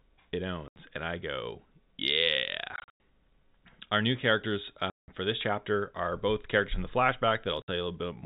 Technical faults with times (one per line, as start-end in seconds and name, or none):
0.68-0.76 packet loss filled with silence
2.76-3.00 packet loss filled with silence
4.90-5.08 packet loss filled with silence
7.62-7.68 packet loss filled with silence